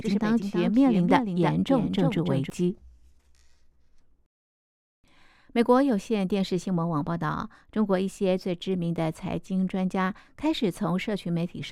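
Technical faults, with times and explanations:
0.0 to 2.5 s, doubled audio track: a slower second capture path or an out-of-step edit likely mixes the speech in twice, so a dry full-band copy trails around 300 ms behind, about 5 dB quieter, present from the start and stopping abruptly at 2.5 s.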